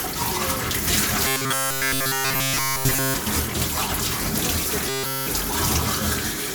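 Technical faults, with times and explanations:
1.27 to 3.14 s and 4.89 to 5.27 s: robotic sound from repeated short buffers. The audio becomes a rigid 134 Hz buzz, likely from a 7.5 ms fragment replayed in place of nearly all the real audio.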